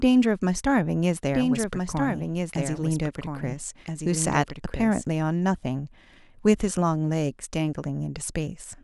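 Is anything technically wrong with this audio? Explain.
Yes. From 1.33 s to 5.05 s the speech is heard twice at once: a second, somewhat quieter copy, around 5 dB down, trails the original by about a second and a half. It is a doubled audio track. The copy is full-band and dry, with no decay or room colour, and it cuts in and out abruptly at those times. It is likely caused by the audio being captured again through a slower path or by an edit holding two offset copies.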